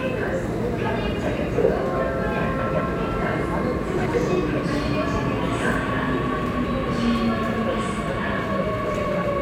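Frames out of order occur at 2.59–2.80 s, 3.98–4.14 s, 6.43–6.64 s and 8.94–9.15 s. Two adjacent blocks of about 105 ms each (78 ms at 3.98 s) were decoded swapped. Each stretch plays its halves reversed, a garbled flutter, and no time is lost.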